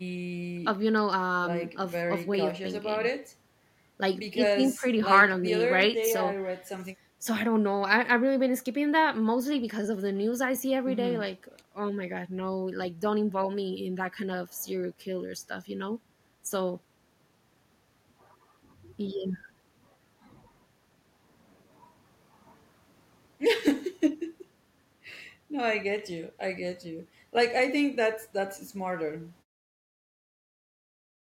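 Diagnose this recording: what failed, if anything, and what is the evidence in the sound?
Nothing failed in this recording.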